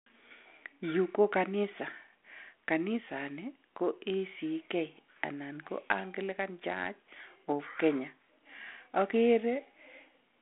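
No technical faults can be heard in the speech. It comes through a telephone-band path of roughly 150 Hz to 3.4 kHz, with the slight coding grain expected of G.726 ADPCM at 32 kbit/s.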